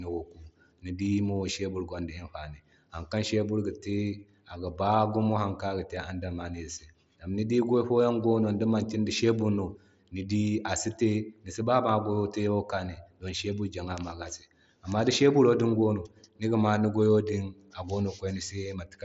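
No technical faults are present in the speech, which comes through a Bluetooth mSBC headset link that carries nothing above about 7.7 kHz and leaves a light grain on the louder sounds.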